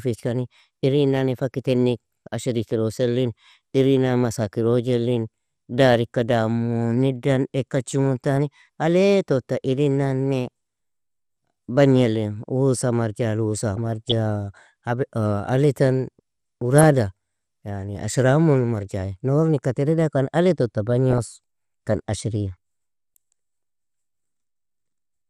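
Speech throughout sounds dull and granular, with a gurgling edge: plainly audible MP2 compression, likely from a low-rate stream around 80 kbps. On a spectrogram the upper bands would appear as blocky patches that switch on and off between frames. DAB burbling breaks in at 13.77 to 14.12 s, 16.78 to 16.84 s and 21.11 to 21.20 s. Residual bit errors at a fraction of a percent throw single sub-bands off level, which shows as isolated bright rectangular bursts on a spectrogram and brief lumpy jumps in the waveform envelope.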